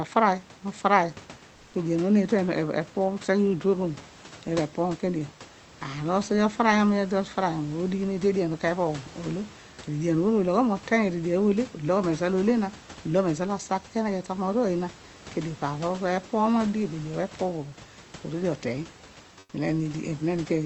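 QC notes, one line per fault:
19.39–19.53 s, comfort noise in place of the background: for 140 ms the room background, about 31 dB below the loudest speech, turns into steady, featureless hiss about 2 dB quieter, likely from discontinuous transmission. A spectrogram shows a smooth, detail-free patch, and the waveform shows a slightly lower, uniform noise floor.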